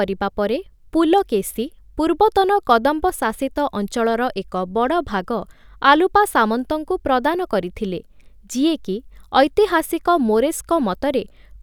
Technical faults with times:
none

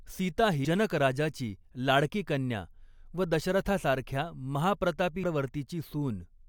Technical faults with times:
0.64 damaged data in a compressed stream
5.23 damaged data in a compressed stream

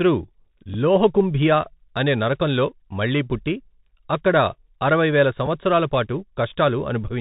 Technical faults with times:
0.00-7.20 Bluetooth CVSD headset codec
0.74 Bluetooth headset packet repeated
5.46 Bluetooth headset packet repeated

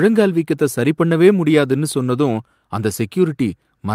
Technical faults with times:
none

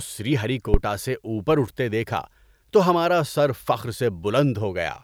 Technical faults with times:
0.74-0.80 phantom power thump

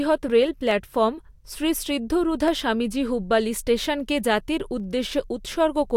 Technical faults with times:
4.80 dropped samples

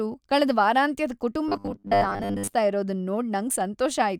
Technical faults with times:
1.48-2.52 robotic sound from repeated short buffers

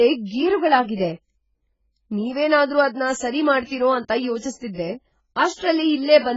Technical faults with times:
0.00-6.36 AAC compression

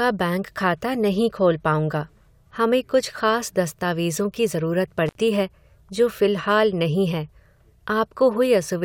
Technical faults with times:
5.06-5.15 intermittent contact

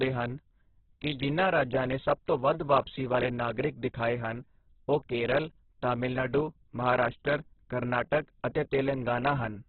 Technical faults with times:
0.00-9.69 Opus compression

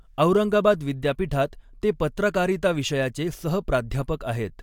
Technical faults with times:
none

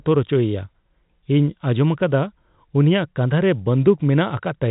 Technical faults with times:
none

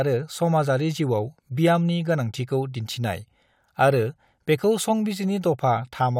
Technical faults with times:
none

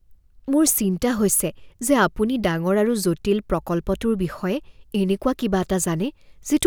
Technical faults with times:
none

